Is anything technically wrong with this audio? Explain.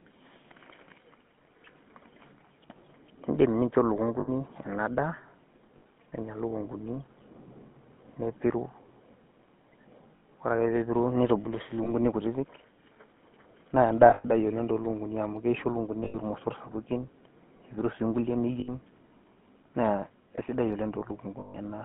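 Yes, there are two problems. The whole clip has gone through the GSM full-rate codec. It models the vocal tract and drives it with a coarse pulse excitation, which fits a 13 kbps coder. The speech sits in a narrow 150 Hz to 3.5 kHz band and carries an obvious buzzy, gravelly roughness.

On top of that there are lost GSM frames at 4.2, 5.78, 10.16, 11.84, 14.1, 16.04, 18.6 and 21.4 s, each lasting 20 to 140 ms. The decoder repeats the last good frame, so you hear a brief metallic ring. The 14.1 s dropout is scattered across about 200 ms, with its longest gap around a tenth of a second.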